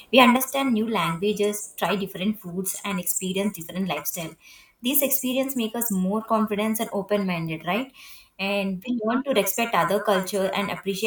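At 0.36 s the speech drops abruptly by about 6 dB and stays down to the end of the clip, which points to one channel drops out, likely one side of a stereo pair being lost before the mono sum. What separates this from a simple gain cut is the instant, steplike fall with no fade, and that anything carried only on the missing side vanishes entirely rather than just getting quieter.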